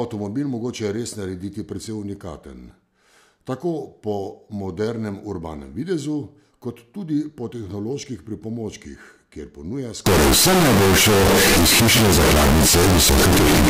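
Float read as integer from 10.06 s to the end: 32-bit float samples likely read as 32-bit integers, turning speech into a near-square, harsh, very loud buzz with noise as loud as speech.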